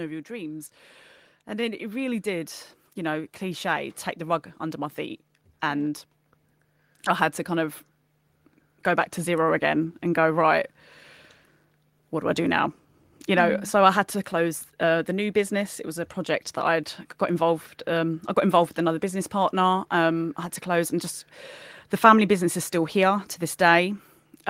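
It's a speech clip with automatic gain rising from about 0.27 s to 9.7 s, just before "and go right". The AGC judged the input too quiet and kept nudging its gain up, roughly 10 dB in all, so voice and background swell together over those nine-odd seconds.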